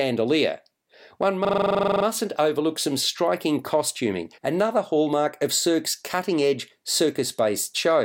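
From 1.45 to 2.05 s there's a system hang loop: the machine or driver stalled while the audio hardware kept replaying its ring buffer. One 43 ms slice repeats fourteen times, giving a rattly stutter at about 23 Hz that sits between a buzz and a machine-gun effect. That loop length fits a 2048-sample buffer. Hardly anything seems to go missing, since the speech resumes with "overlook some striking costuming".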